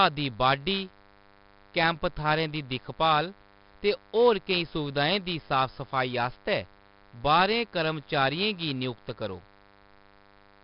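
From start to finish the speech carries a DECT cordless phone buzz, a thin, rasping tone pulsing 100 times a second and sitting roughly 30 dB below the speech. A nearby DECT handset or base fires a brief radio burst every 10 ms, and the audio circuitry rectifies each burst into a click train rich in harmonics. Mains hum is a smooth, rounded 50 or 60 Hz tone. This buzz is edgy and buzzy because its energy spreads far up the harmonic series.

Also present throughout is heavy 4-bit ADPCM compression. Each sample is coded as a coarse 4-bit step from a predicted value, so the error becomes broadband grit that rises and falls with the speech. Loud syllables carry a rough hiss, and sharp onsets distort because the adaptive step can't grow quickly enough. Nothing survives above 5.4 kHz, which points to a sample rate near 11 kHz, fitting about 44 kbps, and leaves the sound dull. Perceptual codecs such as MP3 give swirly, watery artefacts instead, not this level-tracking hiss.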